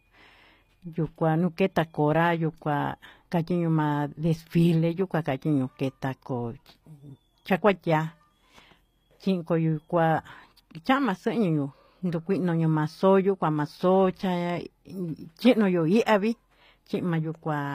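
Speech with plainly audible HE-AAC compression throughout: s sounds come out gritty and metallic, with a bright but synthetic-sounding treble, likely from spectral band replication at a low bitrate. A spectrogram would show blocky, repeated upper-band texture, with nothing above 15.4 kHz.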